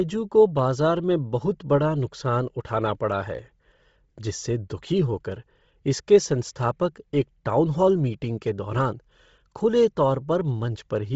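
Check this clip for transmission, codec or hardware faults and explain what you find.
One codec fault is present, and it runs through the whole speech clip. From start to finish, nothing is heard above 7.8 kHz, and the upper band has a breathy, grainy texture with heavy codec damage. The likely cause is Bluetooth LC3 compression: the transform codec runs short frames at a low bitrate, consistent with about 24 kbps in 7.5 ms frames. It strips high-frequency detail and fills the gaps with noise.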